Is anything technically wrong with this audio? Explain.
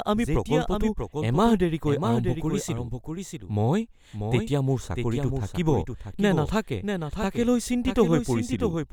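Yes. A doubled audio track runs throughout the speech. A second, somewhat quieter copy trails about 0.7 s behind, dry and full-band. Likely a slower capture path.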